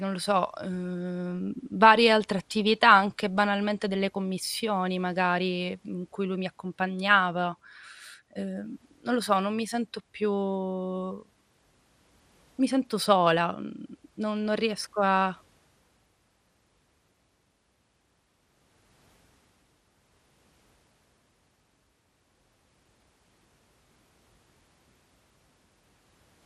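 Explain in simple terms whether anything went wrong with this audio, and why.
The speech sounds dull and gurgly from start to finish, with a grainy edge, likely from MP2 compression. Unlike a simple treble cut, the high parts of the sound flicker on and off instead of staying steadily muffled.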